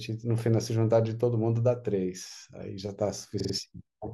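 A stutter runs from 3.39 to 3.53 s, where the same short slice of sound, about 46 ms long, plays three extra times in quick succession before the audio moves on. This is repeated frames: a block of compressed data, which fits a pair of codec frames, was written or transmitted more than once, so the decoder played it again each time. The repeats add about 139 ms to the clip.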